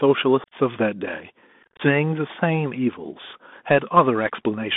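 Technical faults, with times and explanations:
Throughout, Bluetooth CVSD headset codec: the speech is squeezed into a narrow telephone band of about 200 Hz to 3.6 kHz, with one up-or-down bit per sample at 64 kHz and an adapting step, so loud high sounds outrun the step and distort, s sounds turn scratchy and a granular hiss sits underneath.
0.44–0.53 s, unconcealed Bluetooth headset packet loss: about 68 ms of speech vanishes in scattered gaps across 75 ms, the longest run about 38 ms, because lost voice packets left abrupt silent holes that make the speech briefly chopped, returning quieter for a moment.
1.63–1.81 s, unconcealed Bluetooth headset packet loss: a longer stretch where about 113 ms is lost across 165 ms, again with runs up to about 38 ms, roughly fifteen dropped packets, giving a rough, crackling, stuttering patch with hard-edged holes and a momentarily weaker level afterwards.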